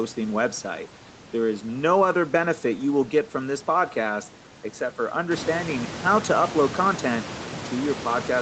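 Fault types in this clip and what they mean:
No faults can be heard in this speech recording. The room's background noise rises by about 13 dB from roughly 5.5 s but stays about 12 dB below the speech, and the call path carries nothing above 8 kHz.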